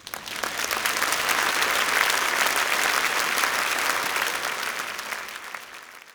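A loud pop at 4.04 to 4.06 s: a single sharp transient, around 10 dB above the sound, most likely a voltage pulse from a switch or static.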